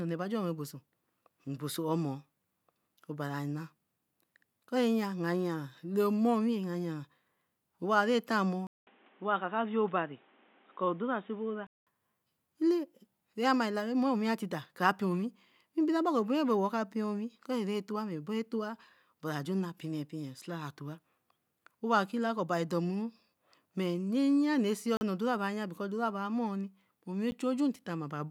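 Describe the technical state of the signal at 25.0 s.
At 25.0 s the speech drops out in a block of digital silence. It runs from 24.97 to 25.01 s, a gap of 40 ms. For that span the signal is silent. The likely cause is an output buffer that was not filled in time. The signal cuts off and returns with no fade. At this length it is heard as a short hole.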